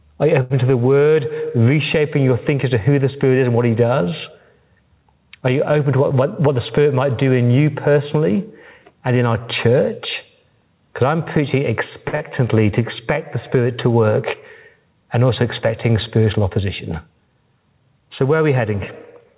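Gain pumping runs through the whole speech clip: the gain swings by about 10 dB, pulled down under loud syllables, likely from gain set too high with a fast limiter clamping it. On the waveform, the envelope looks flattened.

At 0.42 s a short stall from a late packet holds the sound for 79 ms while the receiver waits, with nothing lost. A spectrogram shows frozen, smeared harmonics across 0.42 to 0.52 s, heard as a brief hang.

From 5.92 to 7.01 s, between "you open" and "do in you personally", a jitter buffer speed-up trims small pitch-period chunks, about a tenth of a second in total. The speech runs at 107% with pitch unchanged and sounds hurried. The waveform shows slightly compressed syllable spacing.

At 12.08 s, after "I'm preaching", another short stall from a late packet stretches the sound by 49 ms, seen as a brief static stripe of repeated harmonics.

Straight after it, at 12.15 s and before "to expect the", a burst of packet loss drops 60 ms of audio. 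The receiver fills 53 ms by continuing the last sound and fading it, so the held sound decays on the waveform before speech resumes further on.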